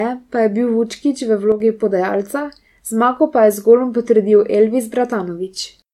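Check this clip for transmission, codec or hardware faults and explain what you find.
Two faults are present: a smeared, degraded codec sound across the whole speech clip, and a brief level drop early on.

Throughout, the speech sounds swirly and hollow, with softened consonant attacks and no content above 17 kHz. This is likely generation loss: the audio was AAC-encoded a few times over, which fits around 96 kbit/s per pass. Each pass requantises on a shifted frame grid, so noise and spectral holes accumulate.

From 1.52 to 1.60 s, just before "podajalca zmago pa je", the level abruptly dips by about 6 dB and then recovers. This is likely one channel dropping out: with one stereo side gone, the mono sum loses half of the shared signal.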